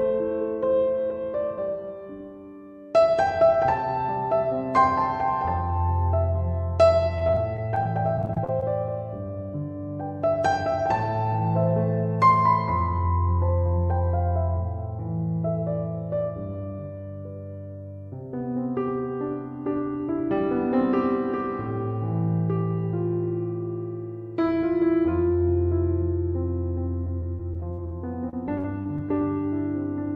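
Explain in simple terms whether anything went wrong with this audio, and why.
From 7.18 to 8.63 s, and again from 27.05 to 27.91 s and 28.29 to 29.11 s, the sound turns choppy and robotic. This is repeated packet loss: chunks of audio went missing in quick succession, and each hole was patched by stretching the sound just before it.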